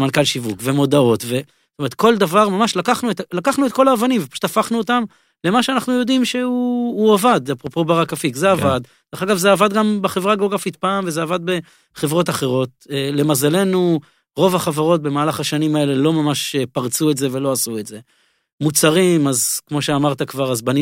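Loud pop at 7.67 to 7.69 s: one sharp pulse a few decibels above the speech, likely an electrical voltage spike added to the signal.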